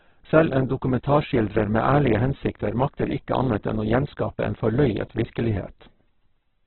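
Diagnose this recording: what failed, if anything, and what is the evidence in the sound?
The codec stage failed: heavy Opus compression runs through the whole clip, most likely. The speech has nothing above 4.2 kHz and sounds rough and grainy, with band energy kept but detail filled in by folding or noise. That fits a very starved CELT-mode encode near 8 kbps.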